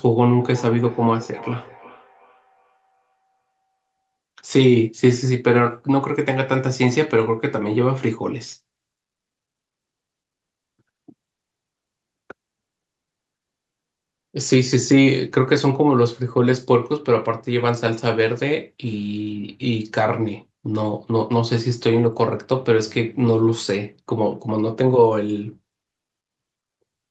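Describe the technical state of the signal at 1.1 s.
At 1.1 s the speech is inside a stretch of feedback echo between two devices, running from 0.38 s to 4.08 s. Two devices on the same call share a room. One plays back what the other's microphone sent, and that microphone picks it up again. Each echo canceller only removes its own device's playback, so the loop survives. The speech returns about every 0.4 s, sounding thin and ringing, at its loudest about 19 dB below the direct speech.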